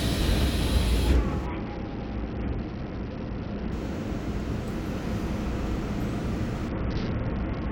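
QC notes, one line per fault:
1.46–3.72 s and 6.69 s to the end: Bluetooth SBC bit pool drop. The top end dulls and a gritty, grainy noise rises under the sound. Each time the link apparently congested and the encoder cut its bit allocation, which fits a fall from a bit pool of 31 to about 7, near 61 kbps. The highest sub-bands lose their bits and the rest are quantised coarsely. The first episode recovers at 3.72 s. The second persists to the end.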